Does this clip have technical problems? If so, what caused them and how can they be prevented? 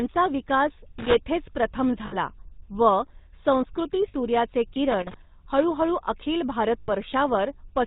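Yes. The GSM full-rate codec affects the whole clip, which fits the 13 kbps full-rate standard. The vocal tract is modelled and driven by sparse, regularly spaced pulses, giving a buzzy, gravelly roughness. A spectrogram shows a hard ceiling at 4 kHz and smeared harmonics. Prevent it by using a wideband codec such as AMR-WB or EVS end to end.

Lost GSM frames occur at 2.06 to 2.14 s, 4.08 to 4.14 s and 6.80 to 6.92 s, lasting about 60, 60 and 80 ms. That fits three, three and four dropped 20 ms frames. The decoder repeats the last good frame, which rings metallically. On a spectrogram these show as frozen bands. Stronger channel coding or better coverage would prevent them.

Loose connector crackle runs from 4.90 to 5.14 s. A worn or dirty contact makes and breaks as it moves, chopping the signal and adding pops from any DC on the line. The waveform shows irregular spikes and dropouts, and the spectrogram shows broadband vertical streaks. 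Prevent it by cleaning, reseating or replacing the connector and strain-relieving the cable.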